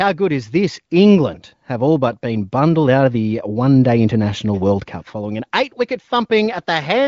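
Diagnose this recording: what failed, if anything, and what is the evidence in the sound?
Nothing failed in this recording; the sound gives no evidence of a fault at any stage.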